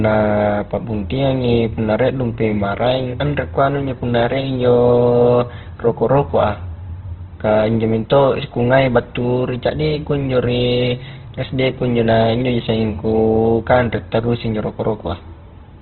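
Throughout, the speech has nothing above 4.1 kHz and sounds rough and grainy, likely from heavy Opus compression at a bitrate near 12 kbps.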